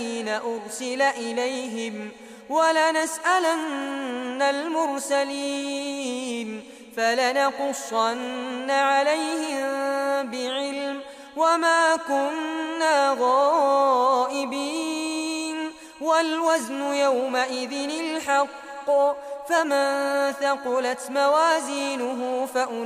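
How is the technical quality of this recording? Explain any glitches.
Nothing stands out on a listen: no glitches or technical hiccups turn up anywhere in the recording.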